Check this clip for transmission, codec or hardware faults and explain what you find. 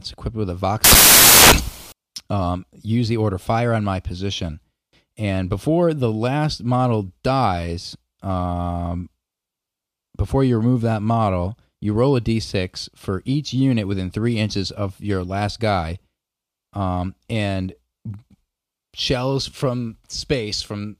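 One fault is present. From 0.84 to 1.92 s, between "equipped with a" and "um use the order", the speech gives way to loud, harsh broadband noise for about a second. These are samples built from the wrong bytes: the reader misassembles each sample, so the fast-changing low bits become the large part of every value.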